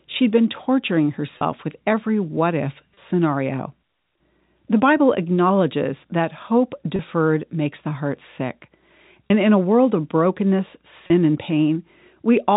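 Speech over a telephone-band line, with five brief moments where the sound hangs on a slightly held, buzzy tone at 1.38, 2.94, 6.96, 9.28 and 11.08 s. This is packet loss with pitch repetition. Each gap is about 30 ms, consistent with a single lost packet, which the receiver filled by replaying the last pitch period. The G.711 telephone coding caps the band at 4 kHz.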